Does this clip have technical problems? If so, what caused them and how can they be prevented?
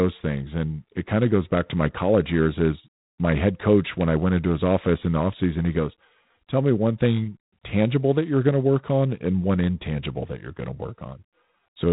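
Yes. G.726 ADPCM coding runs through the whole speech clip. Each sample is sent as a coarse difference from a running prediction, so quantisation noise rides on the signal as a harsh, rasping hiss that swells and fades with the speech level, which fits a 24 kbit/s mode. Nothing passes above 3.9 kHz. On a spectrogram that shows as a hard ceiling with grainy noise filling the voiced bands; the waveform looks roughened. Using 32 kbit/s or a wideband codec would prevent it.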